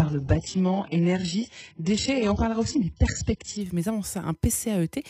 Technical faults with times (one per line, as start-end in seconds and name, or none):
0.00-3.61 adaptive stream starting at a low bitrate